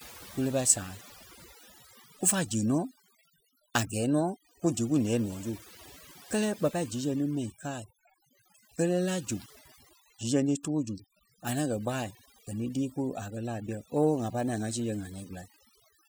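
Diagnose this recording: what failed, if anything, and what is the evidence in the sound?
The background drops between phrases throughout the recording, leaving twinkling specks. This is overdone noise removal at the processing stage. A noise reduction stage set far too strong is pulling individual frequency bands down, or out entirely, whenever they sit close to its noise estimate. The quieter components of the speech fall below that threshold and are removed along with the noise.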